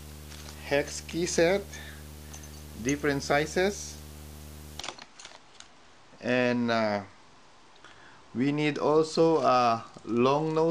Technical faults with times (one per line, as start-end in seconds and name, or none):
0.00-4.81 video or display buzz